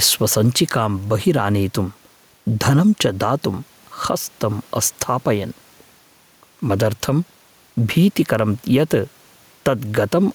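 Speech with gain pumping throughout, likely from input gain set too high into a fast limiter: the background swells roughly 5 dB in pauses and ducks under loud syllables, showing as a breathing noise floor between denser speech regions on the spectrogram and waveform.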